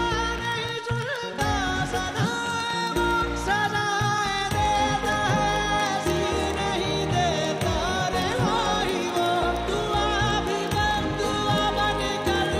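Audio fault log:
0.12–12.56 s: word clock ticks, a steady train of sharp clicks of uneven strength roughly every 30 ms, some 400 in all. The receiving device runs unlocked, about 700 ppm off the sender's clock, dropping or repeating a single sample at each slip. The even spacing sets it apart from random crackle or dropouts.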